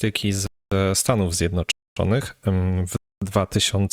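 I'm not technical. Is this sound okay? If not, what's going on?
No. The speech cuts out sharply three times, at 0.47, 1.72 and 2.97 seconds. Each silence lasts a quarter of a second. This is a gap between chunks. The audio comes in one-second pieces, with silence inserted between them. Nothing is lost. It's just interrupted.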